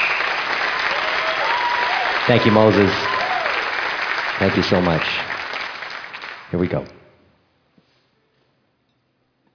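Aliasing runs throughout the clip. The sound points to a drop from 44.1 kHz to about 11 kHz without an anti-alias filter, so content above 5.5 kHz folds back into unrelated pitches about 15 dB below the signal, making bright sounds gritty and metallic right up to the band edge.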